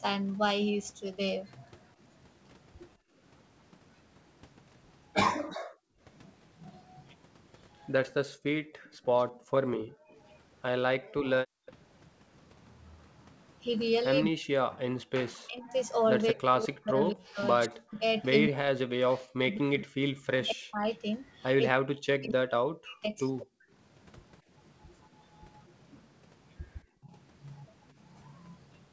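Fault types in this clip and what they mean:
Background gated by the echo canceller: at 2.97–3.15 s, 5.47–6.0 s and 8.3–11.66 s, the canceller clamps the microphone while the loudspeaker plays, dipping room sound by about 24 to 40 dB.
Echo leak: at 8.94–10.39 s, 11.66–11.72 s and 20.94–20.98 s, a faint copy arrives about 223–234 ms late, well below the speech, likely loudspeaker sound the canceller failed to remove.
Speech suppressed in double talk: across 14.26–23.47 s and briefly at 27.01–27.12 s, the talker dips deeply or drops in pieces, likely because the canceller mistook overlapping talk for echo.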